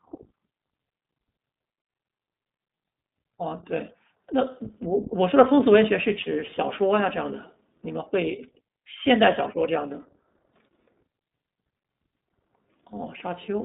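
Throughout, the speech has been squeezed through the iLBC codec, which codes each 20 ms frame on its own. The plainly audible rough, synthetic edge fits its 15.2 kbps mode. The band runs from 200 Hz to 3.7 kHz, and nothing passes above 3.8 kHz, so the speech sounds narrow and muffled.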